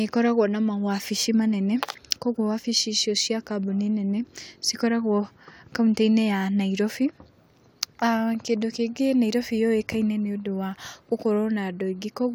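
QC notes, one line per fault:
No faults found on this speech clip.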